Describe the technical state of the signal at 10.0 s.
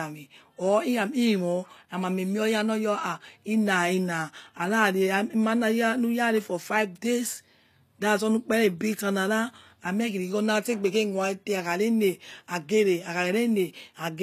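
HE-AAC compression is the likely source of what is heard at 10.0 s, since the damage runs through the whole clip. Only the lower spectrum appears to be coded directly, and the treble is rebuilt by copying lower bands upward under a coarse envelope. The upper range sounds bright but synthetic, with nothing above 14.9 kHz, and sibilants come out gritty and metallic. The damage is plainly audible, which fits a low bitrate around 24 kbps.

Sample clock jitter is also present at 10.0 s and throughout. The converter's clock wavers by a fraction of a microsecond, so each sample is taken slightly early or late. The resulting error grows wherever the waveform changes fastest, sitting roughly 50 dB below the signal. It is heard as a hiss or roughness that rises on loud, bright parts of the speech and disappears in the pauses.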